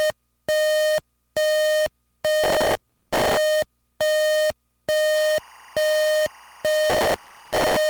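From 2.44 to 3.37 s there is a burst of processor overload crackle. The processor kept missing its deadlines on very short buffers, which fits a buffer of a few milliseconds, and on the order of a hundred deadlines were missed. Each miss replays a scrap of old audio with hard edges, so the sound takes on a gritty, tearing crackle. What separates this from a single dropout or a bad cable click is that the glitches come as a dense, rapid stream and then stop cleanly once the load passes.

From 5.15 s to the end, timecode bleed appears. Linear timecode running at 23.976 frames per second has leaked into the audio from a neighbouring track or cable, about 25 dB below the sound. Its square wave flips between tones near 1 and 2 kHz, heard as a steady chirping warble. Unlike the crackle, it is regular and continuous, a patterned tone rather than random grit.

From 6.90 to 7.77 s, processor overload crackle returns with the same dense tearing, layered over the warble.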